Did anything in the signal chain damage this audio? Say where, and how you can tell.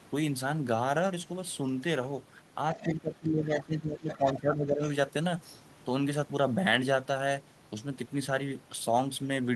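Yes, in call processing. From 2.74 to 4.86 s the speech sinks by roughly 15 dB: speech suppressed in double talk, likely the echo canceller ducking everything.

There's also the other side's voice leaking through, faint scraps around 15 to 20 dB down at 2.74–2.87, 3.60–3.64 and 4.1–4.4 s, likely residual loudspeaker echo the canceller missed.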